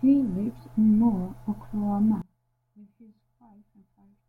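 From 2.22 s to the end, the speech suddenly drops by about 26 dB to a faint copy. The likely cause is one channel inverted: one stereo side has flipped polarity, so the centred voice cancels when the channels are summed to mono, leaving only their small difference. On a waveform the amplitude collapses abruptly at that point. On a spectrogram the energy fades sharply.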